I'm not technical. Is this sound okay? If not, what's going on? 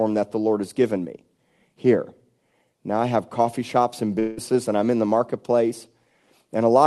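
No. From 4.19 to 4.39 s, the speech turns into a brief fading buzz, then continues with a piece missing. This is likely a long network dropout.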